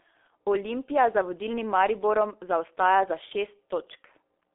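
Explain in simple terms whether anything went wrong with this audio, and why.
Yes. Throughout the whole clip, the speech has passed through the G.723.1 codec, an old internet-phone compression scheme. Nothing above about 3.7 kHz survives, so it sounds muffled. Unlike a plain phone line, the heavy squeezing also makes it hoarse, with smeared consonants.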